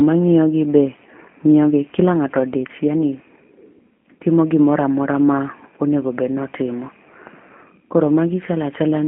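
From start to finish the speech carries a G.729 codec sound: a narrow telephone band of roughly 150 Hz to 3.4 kHz with nothing above 3.6 kHz, and a plainly rough, synthetic edge where the pulse-based model rebuilds the voice, which fits an 8 kbit/s G.729A link.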